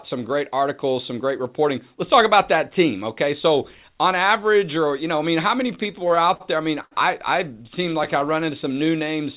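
From 5.68 to 6.42 s the speech shows repeated stalls (stutter). Packets kept arriving late, so the jitter buffer ran dry nine times, and the receiver filled about 140 ms by continuing the last sound, the longest wait being 62 ms. Nothing is lost, but roughly a fifth of that stretch is filler, so the speech drags and catches in small hiccups. The call path itself carries nothing above 4 kHz, which fits narrowband G.711-style coding.

At 6.82 to 6.93 s, just after "there I mean" and before "I I", comes a short stall from a late packet. One packet missed its slot, the buffer emptied, and the receiver held the current sound for about 93 ms before resuming where it left off. The result is one syllable hanging on too long with a slight buzz or dip, and the playout delay grows by the same 93 ms.

Stuttering returns from 7.63 to 8.37 s, after "I mean I I": eight brief gaps totalling about 75 ms, none longer than 17 ms, filling about a tenth of the span. 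These are quicker flickers than the first burst.

Overlapping it, from 7.89 to 9.10 s, the jitter buffer slow-down sets in. Short of reserve, the receiver repeated single pitch periods and slivers of pause to add about 104 ms, so the speech plays at about 92% speed with unchanged pitch, sounding slightly drawn out.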